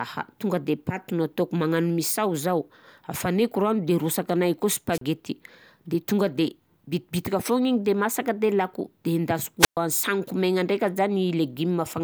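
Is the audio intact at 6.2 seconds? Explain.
Yes, at 6.2 seconds the speech runs intact with no audible fault.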